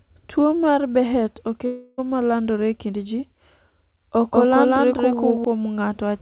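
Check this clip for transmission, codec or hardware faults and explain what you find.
Two faults can be heard in this speech clip, which has been carried over a narrowband call path: nothing reaches above 4 kHz, consistent with G.711 A-law at 64 kbps.

Long network dropout, 1.66 to 2.00 s. A gap of about 320 ms in the incoming stream, likely from lost or badly delayed packets, meant the receiver had nothing real to play. It covered almost the whole gap by stretching the last sound it had, so there is no true silence. Instead a smeared buzzy tone fades out, and the speech then resumes with that third of a second missing.

Doubled audio track, 4.33 to 5.45 s. For just over a second a second full-band copy of the speech runs about a fifth of a second behind the original, at roughly the same level. This is probably a second, slower capture path or an edit that leaves two copies out of step. 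Because the copy has no decay and no room colour, it sounds like a flat echo. It cuts in and out abruptly at both ends.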